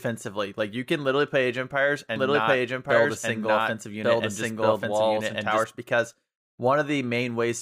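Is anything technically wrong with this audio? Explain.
Yes. From 2.16 to 5.64 s, a doubled audio track repeats the speech about a second later at similar loudness, likely from a lagging second capture path. Unlike echo, the copy never decays and starts and stops abruptly.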